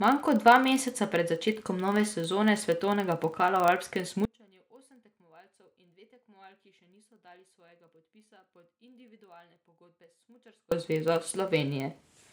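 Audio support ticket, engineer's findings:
Filter restarted on every block: steady 25 Hz buzz under the speech for the whole clip, rising and falling with level. A filter is dropping its state each block, so every block opens with a tick, which fits roughly 40 ms blocks.

Audio dropout to a faint residue: speech cuts abruptly right after "svetovnega pokala v alpskem" at 4.25 s and returns at 10.72 s, about 6.5 s lost. The gap holds only a faint residue, around 30 dB down. Likely an upstream input loss with the downstream path still live.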